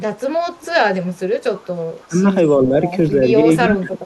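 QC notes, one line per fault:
0.56–0.68 s, 1.15–1.19 s, 1.56–1.69 s, 3.69–3.75 s: echo leak. A faint copy of the speech is audible about 317 ms late, much louder in the last instance, likely from an echo canceller letting loudspeaker pickup back through.
2.08–2.26 s, 2.58–2.73 s, 3.62–4.02 s: speech suppressed in double talk. The speech level dips by about 15 dB, then mildly, and then by around 30 dB near the end, likely from the canceller turning everything down while both sides talk at once.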